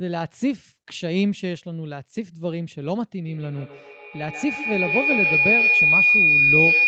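At 3.24 s a feedback howl starts and runs to the end of the clip. Sound from a loudspeaker is returning to a microphone with gain on each pass. It narrows to a whistle near 3 kHz, the loop repeating about every 150 ms. It peaks about 6 dB above the speech.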